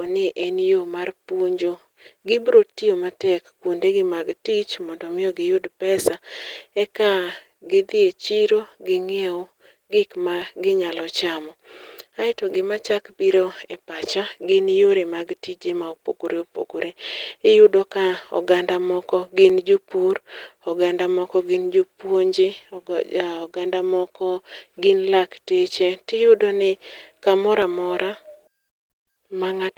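Sharp single clicks at 10.42 s, 19.50 s and 27.62 s, just after "tiyudo ni kamoro", are dropped samples, likely a fraction of a millisecond lost, making the waveform jump.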